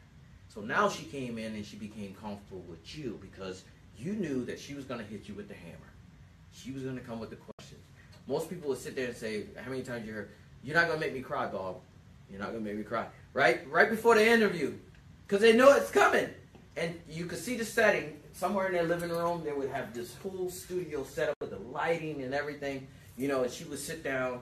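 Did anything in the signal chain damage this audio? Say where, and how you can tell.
Yes. Two digital broadcast dropouts occurred in the reception stage, from 7.51 to 7.59 s and from 21.34 to 21.42 s. In each, the receiver stopped getting valid frames and muted for about 80 ms, which fits three lost frames. A fast fade of about 3 ms leads into each hole. The waveform drops to a flat line with no tail, and the spectrogram shows a clean vertical gap across every frequency. The sound resumes later in the programme, so the material in those gaps is gone.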